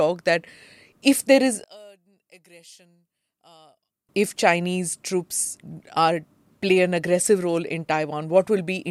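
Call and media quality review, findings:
One channel inverted, 1.64–4.09 s, after "if there is": speech level drops by about 29 dB to a faint residue, then recovers. Likely cause is polarity reversal on one stereo leg before a mono downmix; the centred speech common to both channels cancels, leaving only inter-channel differences.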